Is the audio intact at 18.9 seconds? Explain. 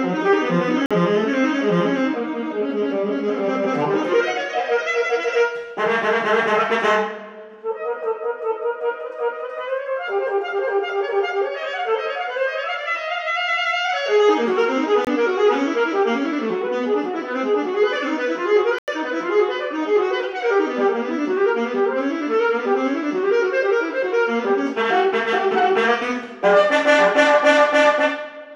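No, not quite. There's a block of digital silence from 18.79 to 18.88 s, about 93 ms, which fits a 4096-sample buffer not being filled in time. The sound drops straight to silence and back, so you hear a short hole.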